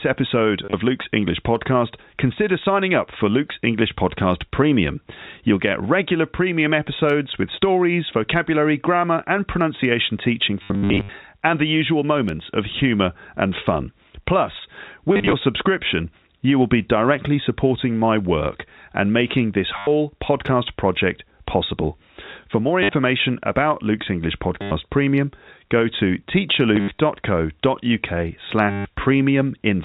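Speech over a telephone-band G.711 path, with no content above 4 kHz, is interrupted by packet loss with last packet repeated at 0.65, 10.63–11.09, 15.13, 19.78, 22.83, 24.62, 26.76 and 28.71 s. It is heard as brief robotic stutters. The longest, about 0.46 s, is a scattered buzz. The repeat rate, near 100 Hz, fits 10 ms packets. A waveform shows identical copied blocks, and a spectrogram shows vertical click lines and a flat, smeared stretch.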